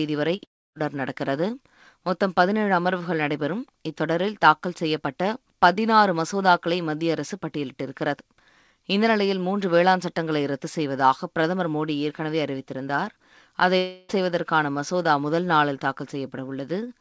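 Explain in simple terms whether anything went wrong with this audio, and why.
Something did go wrong, in two ways, and both come from the call connection.

The first is a short concealed packet loss at about 0.36 to 0.40 s. Around 20 ms of the call never reached the receiver in time. The receiver covered the hole by carrying on the last sound for that moment, then blended back into the real audio. You hear it as a brief smear or wobble right near the start.

The second kind is a long network dropout, and it happens twice. The first is at 0.44 to 0.78 s. About a third of a second of audio is missing. The receiver stretches the last sound for a moment, then goes quiet for most of the gap. The second is at 13.78 to 14.11 s, again about a third of a second lost. This time the gap never goes silent. It is filled all the way with a carried-on sound. In both, the audio resumes further on, and the lost part is gone. 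A stall in the network is the likely cause.

The sound also has nothing above 8 kHz, which fits the G.722 call codec it passed through.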